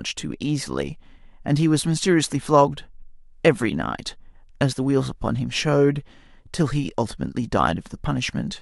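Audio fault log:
Nothing to log here, since the speech comes through without any audible trouble at any point.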